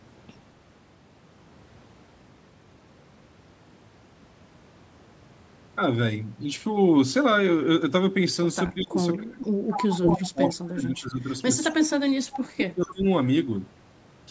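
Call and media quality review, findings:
Speech suppressed in double talk: speech ducks and breaks up at 8.69–9.56 s, 9.89–12.14 s and 12.56–13.05 s, dropping by up to about 30, 25 and 20 dB. Likely the echo canceller, which cannot separate near talker from loudspeaker echo and attenuates both.

Echo leak: a delayed copy of the speech, trailing by 231 ms, at 9.69–10.69 s (about 10 dB below the speech), then brief scraps at 12.34–12.41 s and 12.87–12.91 s (about 15 and 20 dB down). Likely residual loudspeaker echo passing an incomplete echo canceller.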